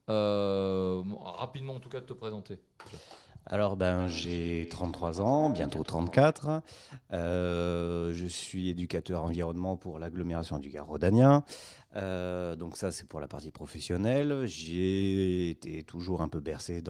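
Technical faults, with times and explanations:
4.0 to 6.37 s, feedback echo between two devices: the speech returns as repeats spaced roughly 150 ms apart, the loudest about 10 dB below the direct sound, each pass thinner and more ringing. A second device in the room replays this signal and the first device's microphone picks it up again, beyond the reach of that device's echo canceller. Room reverberation would smear into a continuous tail, and a single-device echo would return once, not cycle at a fixed interval.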